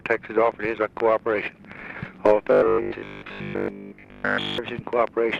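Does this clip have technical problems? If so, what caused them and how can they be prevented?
Yes. From 2.52 to 4.58 s the sound turns rigid and metallic, with a fixed buzz at 50 Hz riding over it while the underlying sound remains only roughly traceable. This is robotic sound from repeated short buffers, likely caused by audio arriving too seldom, so the playback side kept looping the last chunk, about 20 ms long to match the 50 Hz buzz, for roughly 70 percent of that stretch while the real audio was skipped. Larger jitter buffers, a steadier network or processing path, and enough CPU headroom to deliver audio on time would prevent it.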